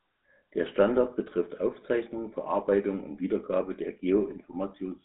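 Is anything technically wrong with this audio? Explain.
Yes. Throughout the speech, the GSM full-rate codec leaves plainly audible damage. It models the vocal tract and excites it with sparse regular pulses, which fits a 13 kbit/s coder, giving buzzy, gravelly roughness. A spectrogram shows energy confined to roughly 200 Hz to 3.7 kHz.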